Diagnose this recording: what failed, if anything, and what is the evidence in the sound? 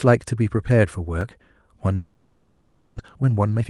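At 1.21 s and again at 2.14 s the speech has a sharp tick, a hard cut to zero and back with no fade. These are blocks of digital silence at the driver or buffer stage: about 4 ms and 8 ms of output were never filled in time.

From 1.95 s to 3.00 s the speech gives way to a decaying buzz that thins to low steady noise, and then the speech resumes with roughly 600 ms missing. This is a long network dropout, likely caused by packets arriving a few hundred milliseconds late, with the receiver filling the gap by extending the last sound.

From 3.04 s to the end the speech runs about 23% fast at unchanged pitch and sounds hurried. This is a jitter buffer speed-up in call processing, which trimmed about 150 ms of pitch periods to shed the backlog left by the dropout. The speech is carried over an Opus call path at 12 kHz bandwidth.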